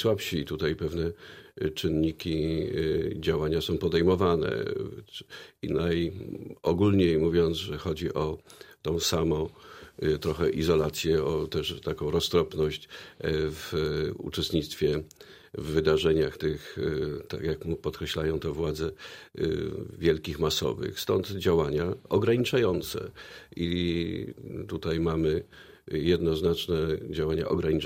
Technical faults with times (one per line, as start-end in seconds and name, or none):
none